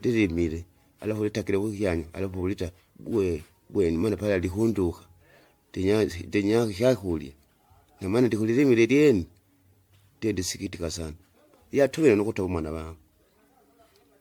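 Throughout the speech, the sound is swirly, smeared and hollow, with blurred consonant attacks and nothing above 19.9 kHz. This is generation loss, likely from around ten successive MP3 passes near 95 kbit/s, each requantising on a shifted frame grid so artefacts accumulate.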